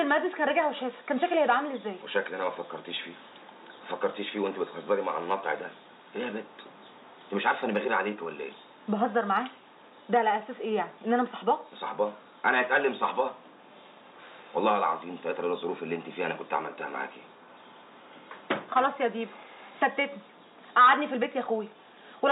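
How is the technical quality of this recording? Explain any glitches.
The technical quality of this recording is sound, with no glitches to explain.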